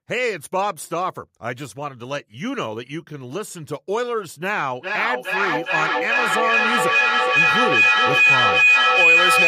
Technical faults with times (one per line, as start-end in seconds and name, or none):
4.79-9.47 feedback howl